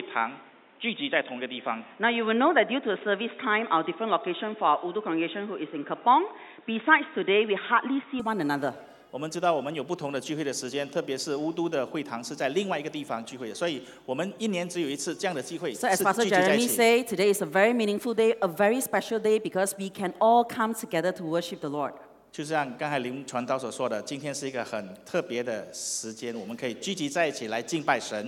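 The recording likely began on a poorer input device, most plausibly a second microphone or a headset's call profile, before switching back to the main input at 8.2 s. From 0.0 to 8.2 s the band stops at about 3.8 kHz, so the sound is dull and boxy, with a faint added noise floor roughly 35 dB down. At the switch there is no gap and little level change, only a sudden opening-up of brightness.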